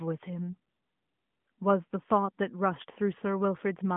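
No technical faults occur: the speech arrives over a narrowband mobile path consistent with the AMR narrowband mobile codec at its top rate of about 12.2 kbps, with a telephone band of roughly 150 Hz to 3.5 kHz, nothing audible above about 3.7 kHz, and only the light coloration that path normally brings.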